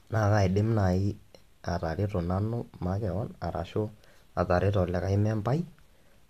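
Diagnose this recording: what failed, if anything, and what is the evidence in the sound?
No fault detected.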